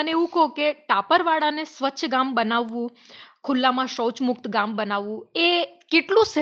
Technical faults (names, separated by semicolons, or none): none